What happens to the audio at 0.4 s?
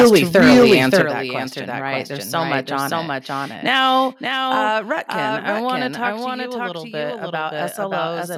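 At 0.4 s the microphone's input gain was likely set too high, so the peaks drive about 11 dB past the converter's limit. This is microphone overload, running from 0.0 to 1.02 s, just before "that question right". Around a tenth of the waveform is flattened, giving a harsh, crackling edge to the loudest syllables.

A doubled audio track is also present, and continues through the whole clip. A slower capture path or a misaligned edit has likely put in a second full-band copy that trails the original by about half a second at roughly the same level. It has no decay or room colour, so it sounds like a hard repeat stacked on the original.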